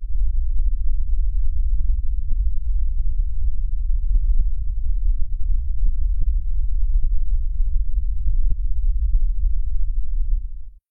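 At 0.51 s and again from 7.11 to 7.16 s, damaged data in the compressed stream makes the decoder lose frame sync, producing short glitches.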